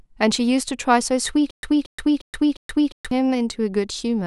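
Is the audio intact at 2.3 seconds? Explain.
No, a stutter with silent gaps runs from 1.51 to 3.11 s. A 0.23 s fragment of speech repeats four times, each followed by about 0.12 s of dead silence, every 0.35 s. This likely comes from a stalled stream replaying its last buffer, so the speech meant for that span is lost.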